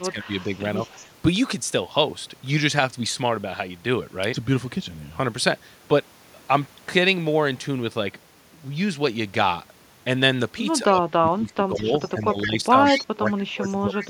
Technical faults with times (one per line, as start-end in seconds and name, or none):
0.11-0.48 speech suppressed in double talk
0.25-0.59 echo leak
0.90-1.07 echo leak
10.78-14.10 speech suppressed in double talk
11.76-12.10 echo leak
12.43-12.48 echo leak
12.85-13.31 echo leak
14.00-14.07 echo leak